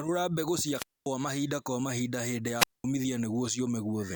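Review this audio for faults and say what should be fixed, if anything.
Wireless microphone squelch dropouts at 0.74–1.09 s, just before "mahinda kwa", and 2.57–2.84 s: the radio signal fades, hiss rises, then the receiver's squelch mutes the speech for 235 ms and 211 ms. To prevent this, keep clear line of sight between transmitter and receiver, use diversity antennas, and check battery and signal strength.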